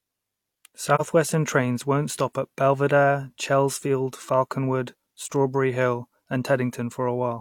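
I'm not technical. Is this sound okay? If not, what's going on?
No. Just before the 1-second mark, from 0.95 to 1.01 s, the speech briefly dips with soft edges. This is AAC frame loss with muting: a tiny chunk of the compressed audio went missing, which fits one lost frame, and the player filled the gap with silence.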